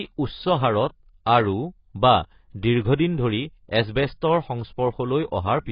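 From start to finish the speech has nothing above 5.2 kHz, and sibilants and held vowels carry a warbling, fizzy smear. That texture, beyond the dull top, marks AAC compression rather than plain low-pass filtering. The damage is heavy, likely from AAC-LC near 16 kbps.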